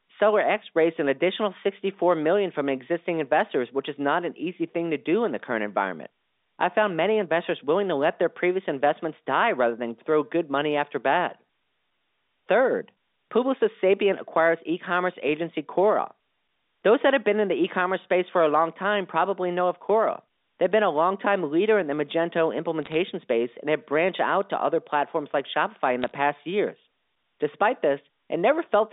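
Two brief bursts of sharp ticking crackle break into this telephone-band speech recording, from 22.83 to 22.94 s, just before "space and have branched", and again from 26.02 to 26.15 s. These are bit errors on a digital phone line: a small fraction of bits, roughly a couple in a thousand, flipped on the G.711 A-law link. Each flip corrupts one sample, and hits on sign or high-order bits become clicks. The underlying band-limited sound, about 250 Hz to 3.7 kHz, is unaffected between the ticks.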